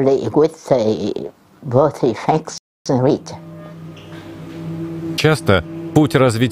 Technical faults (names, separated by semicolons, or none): playback stall; time-compressed catch-up